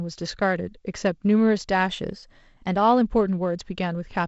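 From 1.90 s to 3.01 s the speech suddenly runs about 5.5% fast and its pitch rises by about 93 cents, nearly a semitone, before both snap back together. This is likely a drift correction step, where clock-matching software briefly changes the playback rate to rebalance its buffer. On a spectrogram the voice harmonics jump upward in one step and drop back at 3.01 s. The waveform looks slightly compressed in time across that stretch. Throughout, the G.722 wideband coding leaves nothing above 7.7 kHz.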